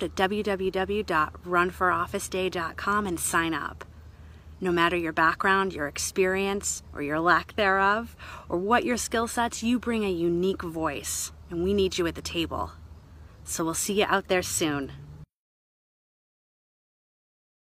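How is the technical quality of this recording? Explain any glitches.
No glitches or faults detected.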